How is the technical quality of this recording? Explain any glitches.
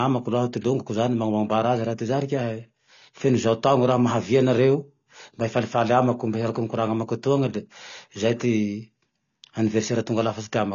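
The technical quality is poor, with plainly audible codec damage across the whole speech clip. The fault is most likely AAC compression, heard as a dull, band-limited sound. The encoder spends too few bits on each block of frequency lines and discards detail, which fits a low bitrate of about 24 kbps. The result is a muffled, smeared texture with a watery, fizzy edge on sibilants and sustained vowels. On a spectrogram, energy stops at a hard ceiling near 7 kHz.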